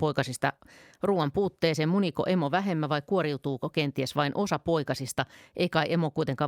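No technical faults can be heard anywhere in the recording, and the speech signal stays intact and continuous throughout.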